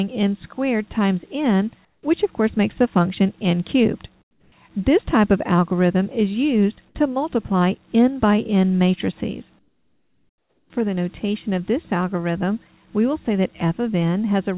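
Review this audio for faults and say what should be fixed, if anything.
At 1.85–2.03, 4.22–4.52 and 9.59–10.7 s, the background drops about 11, 6 and 12 dB into steady, featureless hiss, likely comfort noise in place of the background. A gate would leave silence, not this noise. Disable discontinuous transmission or raise its voice-detection sensitivity.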